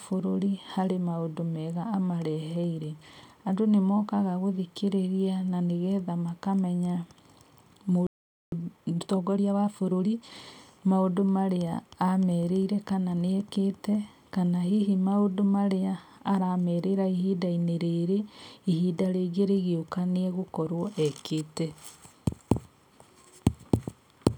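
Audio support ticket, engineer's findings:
Playback stall, 8.07–8.52 s: speech cuts to silence mid-flow for about 0.46 s, then resumes. Likely cause is the player's output buffer running dry or its audio thread being blocked, so nothing reached the device until data or scheduling recovered.

Time-compressed catch-up, 8.52–10.34 s: speech runs hurried at 1.25x with pitch unchanged. Player trimming the backlog from the stall by dropping short segments and cross-fading across the joins until back on schedule.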